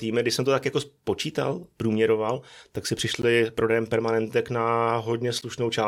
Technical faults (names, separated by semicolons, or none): Bluetooth stall